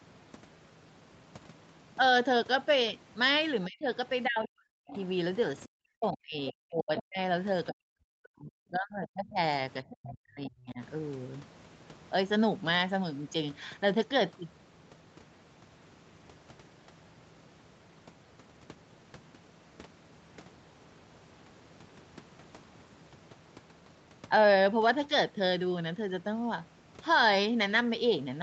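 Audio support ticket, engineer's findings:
Speech suppressed in double talk at 3.66–3.86, 4.26–4.98, 5.66–7.19, 7.71–8.54, 8.70–9.39 and 9.84–10.80 s. Talker drops by up to about 40 dB, shallower near 25 dB at 8.70–9.39 s. Waveform envelope collapses mid-phrase; spectrogram shows blank vertical gaps. Likely echo canceller attenuating talker along with loudspeaker echo during overlap.

Other side's voice leaking through at 4.89–5.03 and 6.46–6.52 s. Faint second voice about 20 dB and 15 dB under the talker, overlapping suppressed stretches. Spectrogram shows brief foreign harmonic traces below the 8 kHz call-path ceiling. Likely residual loudspeaker echo the canceller failed to remove.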